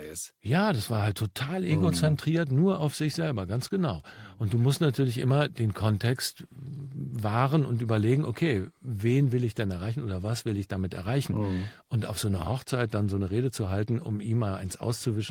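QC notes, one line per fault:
Nothing stood out on listening to the speech in this clip.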